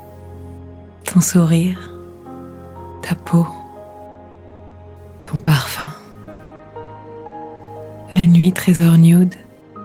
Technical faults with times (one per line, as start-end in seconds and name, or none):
4.11-4.74 repeated packet loss (robotic sound)
5.19-6.90 repeated packet loss (robotic sound)
7.27-7.70 short concealed packet loss
8.11-8.82 repeated packet loss (robotic sound)